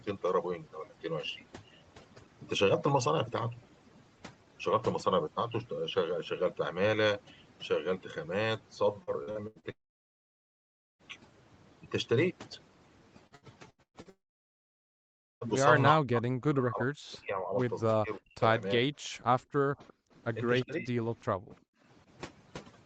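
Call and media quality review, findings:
Overdone noise removal, whole clip. Background drops and breaks up into twinkly specks. The noise suppressor is set too aggressive, so bands it reads as noise get slammed down along with the quieter parts of the speech. It's present throughout, underneath everything else here, including the 8 kHz-wide Opus call path.

Repeated packet loss (robotic sound), 9.03–9.66 s and 13.27–14.09 s. Choppy, metallic stutter. Five gaps in each stretch; the longest runs about 82 ms in the first and 119 ms in the second. Roughly 38% and 42% of each span is patched over. The jitter buffer's concealment stretches the last frame into each hole, and the next loss lands before it recovers.

Long network dropout, 9.71–11.02 s and 14.10–15.44 s, each straight after a choppy stretch. A short fading buzz, then about 1.2 s of silence, and the audio resumes with a chunk gone, around 1.3 s each time. 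Concealment runs out and nothing fills the gap. The likely cause is a transport outage rather than anything at the endpoint.

Speech suppressed in double talk, 15.95–18.90 s, 19.72–19.84 s and 20.66–21.53 s. The talker ducks, down about 40 dB at worst in the first and last stretches and about 20 dB in the short middle one. Overlapping far-end audio is likely confusing the AEC, so it attenuates everything. Worst in the first stretch, roughly 2 s of it hit.

Echo leak at 19.05–19.09 s, 19.88–19.93 s and 20.60–20.66 s. Faint delayed scraps of the voice about 351 ms behind, around 35 dB under the speech in the first two and about 25 dB under in the third. This likely comes from residual echo getting past the far side's canceller on a loudspeaker setup and being sent back.

Background gated by the echo canceller, 19.18–19.44 s. The room tone dips hard, about 40 dB, for roughly 100 ms in total within that window, then comes back. 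The AEC clamps the mic while the loudspeaker plays and releases once it's quiet. It lands right among the echo scraps, which fits the same canceller working hard around 19–20 s.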